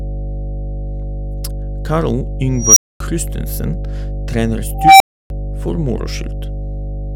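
From the first moment to the end, mains hum sits under the speech as a steady 50 Hz drone at roughly the same level as the talking. It comes from a ground loop or a nearby transformer leaking the power line into the signal path. On a spectrogram it shows as an unbroken horizontal line at 50 Hz with fainter low harmonics stacked above it. In the waveform it is a constant low-frequency ripple on which the speech rides.

At 2.58 s an unstable filter takes over. A recursive filter with bad coefficients feeds its own output back until it grows without bound. A tone of around 5 kHz swells over about 0.18 s, clips, then overflows, and the audio drops out for 0.24 s before the filter resets at 3.00 s. The same failure returns from 4.75 s to 5.30 s, this time with a tone near 700 Hz that builds over 0.25 s, followed by 0.30 s of silence. On a spectrogram each event is a bright horizontal band that intensifies and then ends in a blank gap. 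The waveform shows an envelope that balloons to flat-topped clipping and then collapses to a flat line.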